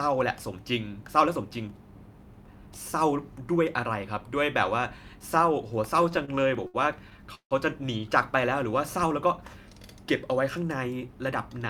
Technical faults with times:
5.97-7.53 repeated stalls (stutter)
10.48-11.32 jitter buffer speed-up

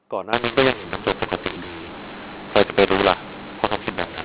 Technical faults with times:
0.33-4.24 mu-law and A-law mixed up

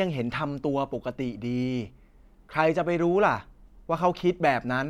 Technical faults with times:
none

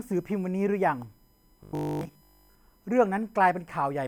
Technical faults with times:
0.00-4.08 USB whine
1.63-2.57 robotic sound from repeated short buffers

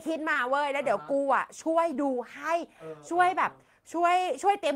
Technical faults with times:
0.33-0.37 short concealed packet loss
1.93-1.97 short concealed packet loss

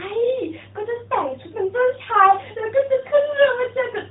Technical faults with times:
none

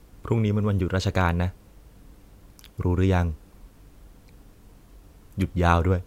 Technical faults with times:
none

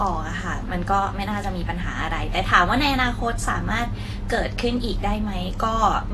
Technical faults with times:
0.00-6.13 transcoding between lossy codecs

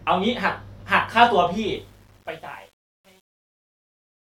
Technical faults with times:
1.76-4.39 truncation distortion on a fade

